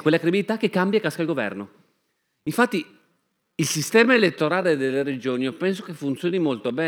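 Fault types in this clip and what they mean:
Time-stretched section: from about 2.78 s to the end, the speech suddenly slows to roughly 0.74 times its earlier pace while the pitch stays put, so it drags rather than sounding deeper. That's likely software stretching the tail to fill a set length, repeating tiny slices of the audio to pad it out instead of resampling it, which would have dropped the pitch along with the speed.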